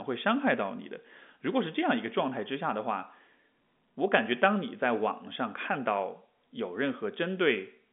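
No technical faults occur at any point in this speech, which carries the narrow telephone band of G.711 coding with nothing above about 3.8 kHz.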